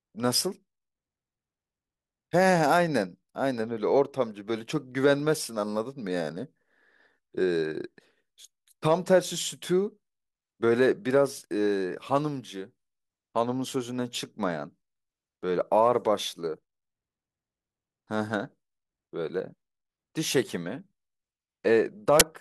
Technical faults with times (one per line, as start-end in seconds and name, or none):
22.20 file tags played as audio